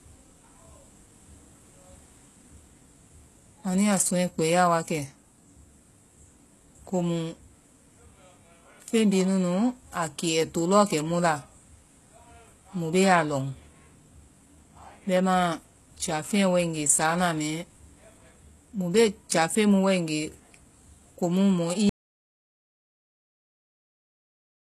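The speech was likely squeezed through HE-AAC compression at a very low rate, consistent with about 16 kbps, so the treble is rebuilt from copied lower bands rather than coded. The codec damage is plainly audible throughout, with nothing above 12.3 kHz and sibilants turning gritty and metallic.

At 21.89 s the input was likely lost, with silence written in its place. This audio dropout to silence cuts the speech off mid-flow and leaves total silence, with no room tone, running to the very end of the clip.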